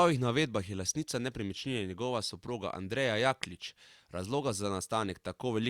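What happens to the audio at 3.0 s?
Nothing goes wrong at 3.0 s: the speech carries on intact through that moment, with no dropout, click, distortion or other fault to be heard.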